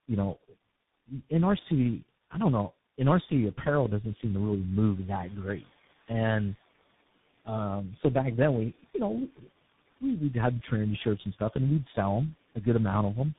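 From start to finish the speech carries tandem speech coding: it sounds like three speech coders in a row, a GSM full-rate stage, then G.723.1, then CVSD, with plain G.711 hops between them. Each one re-encodes the previous one's already damaged output, so the speech comes out rougher and noisier, and the two model-based stages add a muffled, warbly quality. Nothing gets through above 3.8 kHz. Under all that, the room noise steps up by about 12 dB at roughly 5 s and then sits about 26 dB below the speech, which is just the recording space.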